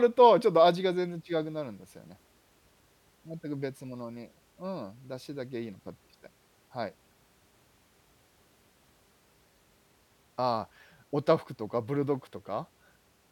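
No technical faults can be heard anywhere in the speech recording; the signal stays continuous and stable throughout.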